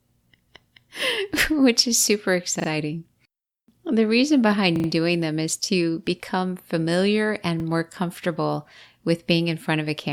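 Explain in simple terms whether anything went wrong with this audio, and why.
Repeated buffer stutters at 2.6, 4.76 and 7.6 s: when audio arrived late, the player replayed a tiny slice (about 40 ms) instead of going silent.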